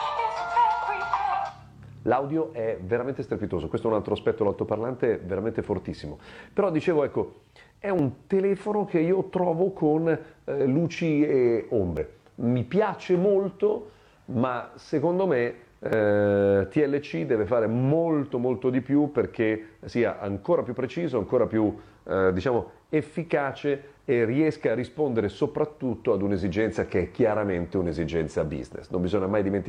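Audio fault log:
7.99 to 19.92 s, overlap between stream segments: four small clicks or skips, at 7.99–8.02 s, 11.97 s, 15.93–15.97 s and 19.92 s, spaced every 4 s. At each one, between about 11 and 38 ms of sound simply goes missing and the waveform jumps across the gap. The steady spacing fits 4-second stream segments whose time stamps overlap, so the player trims the supposed duplicate at each join and removes audio that was never actually repeated.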